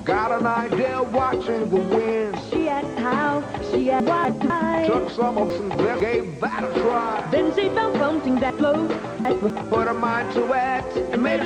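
Chunks out of order at 4.0–4.5 s and 5.5–6.0 s, one 250 ms chunk late each time, then 8.5–9.5 s, three chunks late: jumbled audio with hard joins.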